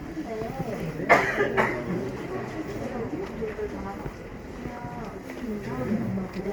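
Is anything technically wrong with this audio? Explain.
Yes. Generation loss runs through the whole clip. The sound has a swirling, hollow quality with smeared transients and blurred attacks, while content still reaches up to about 20.2 kHz. That is likely from lossy encoding repeated around four times, which fits an Opus chain at 64 kbit/s. Each pass re-quantises on a shifted frame grid, so noise accumulates. A single encode at this bitrate would not sound this swirly and hollow.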